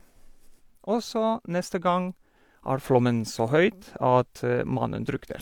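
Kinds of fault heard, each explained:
Sudden gain jump: at 2.84 s the speech and noise floor rise together by about 5 dB, likely an unramped gain change; waveform envelope and spectrogram step up.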